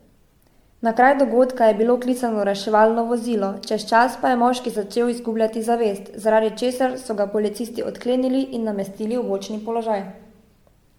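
Speech with generation loss throughout: swirly, hollow smearing and blurred attacks beyond what one MP3 pass near 96 kbit/s would cause, likely from about seven re-encodes.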